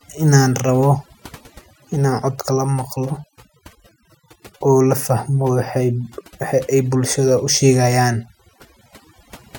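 A speech recording carries overdone noise removal throughout: frequency bands near the estimated noise floor are cut hard, leaving a lowered background with twinkling specks, and quiet parts of the voice are cut along with it. Unlike a noise gate, which mutes everything at once, the suppression works band by band.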